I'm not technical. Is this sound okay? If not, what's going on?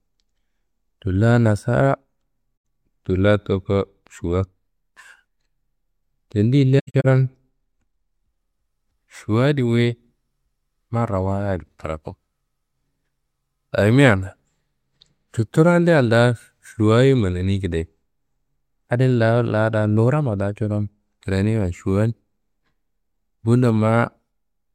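No, not quite. There's AAC frame loss with muting: the speech briefly drops to silence at 2.56–2.64 s, and again in patchy gaps between 6.79 and 7.06 s, the longest about a tenth of a second. Missing chunks of the stream were replaced with silence, faded in and out, so you hear soft-edged holes.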